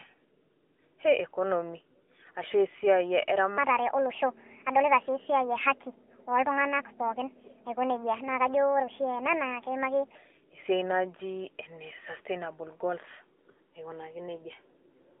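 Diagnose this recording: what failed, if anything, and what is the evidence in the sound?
Throughout, the speech is squeezed into a narrow telephone band of about 300 Hz to 3.4 kHz, with a buzzy, synthetic edge. This is the AMR narrowband mobile codec at the codec stage. Its pulse-driven vocal-tract model and plainly audible coarseness fit a 10.2 kbps mode.

From 3.58 s to 10.15 s the speech turns high and hurried, running 1.41 times too fast and pitched up by roughly seven semitones, then snaps back. This section at the wrong speed likely comes from playback or editing against the wrong clock, which shifts speed and pitch together.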